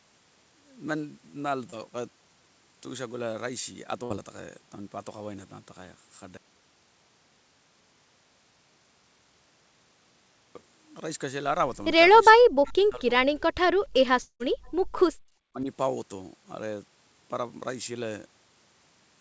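At 1.70 to 1.74 s there is a brief smear in the sound, a small wobble where about 20 ms of audio is missing and roughly 23 ms of stand-in sound covers the hole. This is short concealed packet loss. A packet never reached the decoder in time, so the receiver extended the last sound from what it had and then blended back into the real signal.

From 4.04 to 4.12 s the sound stalls into a held, fading tone for about 58 ms before it resumes, with about 60 ms of the original gone. This is a burst of packet loss. Several consecutive packets failed to arrive, so the receiver kept repeating the last sound while lowering its level. When audio returns, it picks up further on and skips the section in between.

Between 12.30 and 13.09 s the speech dips hard for about 0.7 s in total, falling by roughly 40 dB at its deepest. The likely cause is speech suppressed in double talk. With both ends talking at once, the echo canceller could not separate its own talker from the loudspeaker echo and pulled everything down. 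The same dip returns at 15.45 to 15.69 s, again reaching around 40 dB, for about 0.2 s.

Inside that first dip, at 12.68 to 12.73 s, a faint delayed copy of earlier sound flickers through. It sits some 30 dB below the speech and trails it by 0.43 s. A second scrap at 13.94 to 13.99 s is fainter still, about 35 dB down, with the same 0.43 s lag. This is likely an echo leak: a loudspeaker on one side fed the call back into its microphone, and its canceller let these fragments through.

At 14.22 to 14.42 s the sound turns into a decaying fill for about 177 ms, the last 100 ms of it silent. When it returns, some 180 ms of material is missing. This points to a long network dropout, with the likely cause being a stretch in which no packets arrived at all. The receiver extended the last sound, faded it out, and finally gave up, leaving a gap before the stream resumed further on.

At 14.81 to 14.93 s the room background suddenly sinks by about 37 dB for roughly 0.1 s and then comes back. 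This is background gated by the echo canceller. While the loudspeaker was active, the canceller clamped the microphone down, and it released again once playback eased.

Throughout, nothing is heard above 8 kHz, which fits a wideband G.722 call path.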